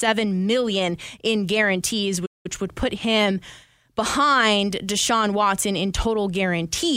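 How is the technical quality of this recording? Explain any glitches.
The recording has one clear glitch: a playback stall from 2.25 to 2.46 s. Just after "million in guarantees", the speech cuts out abruptly and the output goes silent for about 188 ms before resuming with "would put". The likely cause is that the player briefly ran short of buffered data, or its audio thread was held up, so nothing reached the output until it caught up. The result is a hard, unnatural gap in the middle of the phrase rather than a pause.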